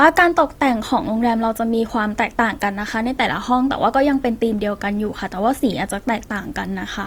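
From start to finish the speech carries a grainy, rough texture, with harmonic detail smeared into noise instead of clean partials. This is plainly audible codec damage, likely from Opus compression in its CELT music mode at a rate that fits about 24 kbps. Short of bits, the encoder keeps each band's energy but fills it with folded or noise-like content. Bandwidth stays full, with content reaching about 20.2 kHz, so nothing sounds muffled.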